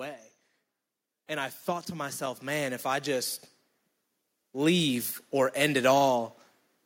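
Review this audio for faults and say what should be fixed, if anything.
Automatic gain rising from 1.27 to 3.42 s. The control judged the input too quiet and slowly added about 8 dB. Speech and background swell together. To prevent it, set a proper fixed input level and turn off automatic gain control.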